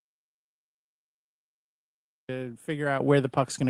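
At 3.0 s the microphone volume is stepped up: the call software judged the input too quiet and raised the device gain in one step of about 8 dB. The speech and background jump louder together, visible as a sudden widening of the waveform envelope and a brighter spectrogram from that point on.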